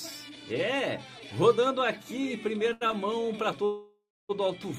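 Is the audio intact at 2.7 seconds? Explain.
No. From 2.69 to 2.94 s the audio hits repeated stalls (stutter). Packets arrived late or slower than playback, so the jitter buffer emptied four times, and the receiver stretched the last sound to cover about 127 ms, roughly half that span, with the longest gap at 79 ms. What sets it apart from packet-loss dropouts is that nothing is missing. The sound drags and hiccups, then resumes where it left off.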